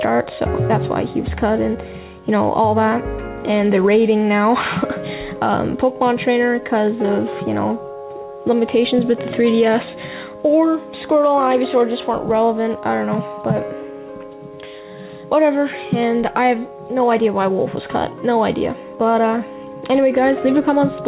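Gain pumping runs through the whole clip, with the level moving by around 5 dB. The likely cause is input gain set far too high, with a fast limiter or compressor clamping down on every peak, so loud and soft passages sit close together and the sound comes across squashed. All of this is heard through a band that stops at 4 kHz, which fits a G.711 call codec.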